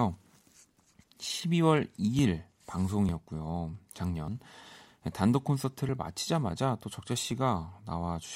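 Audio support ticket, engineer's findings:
Small forward jumps in the speech at 2.19, 3.09, 4.28, 5.89 and 7.31 s. No gaps of silence, just a point where the audio skips ahead. Most skips are tiny, around 10 ms. The one at 4.28 s is longer, a few tens of ms. Likely a dropped buffer (overrun): capture didn't read its buffer before the hardware overwrote it, so that chunk is gone and the edges are spliced together.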